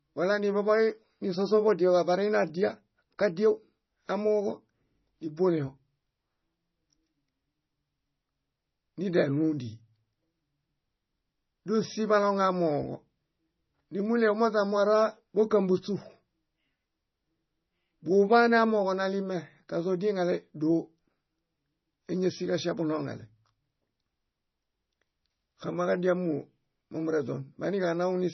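Speech, with MP3 compression damage running throughout. Nothing is present above 6 kHz, and the remaining band sounds watery and swirly as weak frequency components flicker between frames, smearing consonant attacks. This heavy damage fits a low bitrate near 24 kbps, likely from MP3 encoding.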